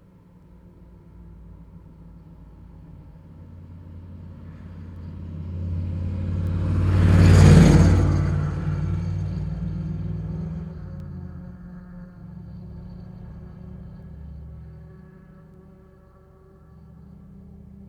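Word clock ticks run from 0.43 s to 17.05 s: around ten brief clicks at a steady rate of roughly one every one and a half seconds. The receiving device isn't locked to the sender's clock, and a mismatch of around 15 parts per million drops or repeats a single sample at each slip.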